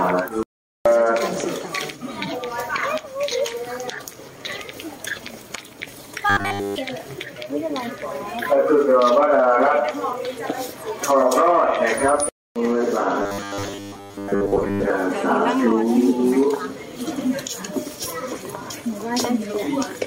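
From 6.30 to 6.78 s and again from 13.22 to 14.90 s, the sound turns into a rigid metallic buzz at 100 Hz: robotic sound from repeated short buffers, likely a 10 ms block replayed to cover late audio, replacing most of the real signal.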